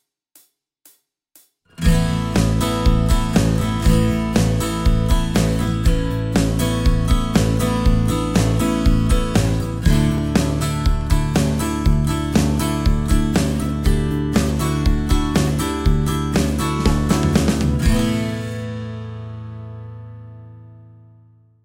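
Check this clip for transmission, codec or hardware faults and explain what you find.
A single fault: a repeated buffer at 10.18 s. New audio missed its deadline, so the device played its last 5 ms block one extra time. With a block that short, the hard joins merge into one brief click rather than an audible stutter.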